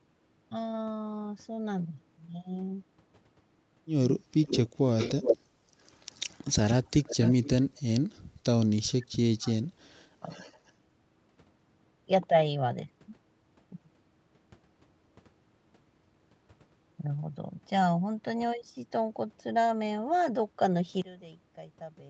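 From 4.18 to 4.4 s the speech dips sharply, by roughly 25 dB at worst. This is speech suppressed in double talk: the echo canceller likely could not separate the talker from the far side. From 4.44 to 5.37 s a delayed copy of the speech about 378 ms behind is heard at roughly the same level as the original. This is an echo leak, likely from loudspeaker pickup the canceller failed to remove. Between 5.5 and 5.6 s the room sound drops out by about 11 dB for a brief moment. This is background gated by the echo canceller, which clamped the microphone while the loudspeaker played. The echo leak returns from 5.81 to 7.81 s, now about 389 ms late and well below the speech. Double-talk suppression then cuts the speech again from 7.78 to 8.25 s, 8.91 to 9.62 s, and 9.97 to 10.3 s, with the deepest drop roughly 40 dB in the middle episode. A faint echo leak, about 411 ms late, follows from 10.29 to 10.72 s. 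From 21.02 s to the end, the level falls by about 19 dB and only a faint residue remains. This fits one channel inverted, likely cancelling the common content when the two channels are summed to mono.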